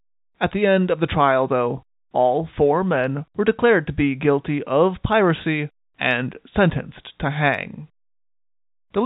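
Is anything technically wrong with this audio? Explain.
No, nothing is technically wrong with this audio.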